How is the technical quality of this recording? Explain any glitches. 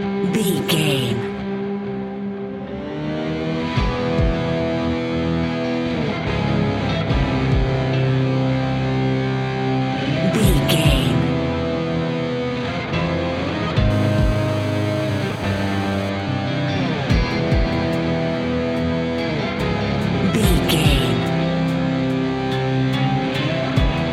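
Two bursts of mobile-phone interference mar the recording, one right after the other.

From 13.90 to 16.10 s there is GSM phone buzz: a nearby 2G handset in a call pulses its transmitter 217 times a second, and the audio circuitry rectifies those pulses. The result is a harsh, raspy buzz about 18 dB below the signal. On a spectrogram it shows as evenly spaced horizontal lines at 217 Hz and its many harmonics.

From 16.20 to 19.28 s come GSM signalling bursts, as a phone in a call keeps only sparse transmissions while the talker is silent. These are heard as faint, even ticks with a longer 217 Hz buzz twice a second, far quieter than before. The waveform shows small, regularly clustered spikes, and the spectrogram shows short, broadband vertical streaks.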